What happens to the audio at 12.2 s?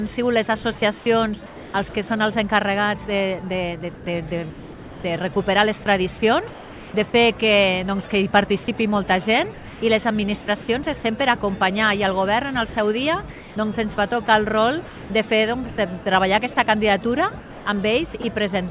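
Nothing goes wrong at 12.2 s: the audio carries on intact through that moment, with only the narrow, telephone-like band of the call path, which has nothing above about 4 kHz.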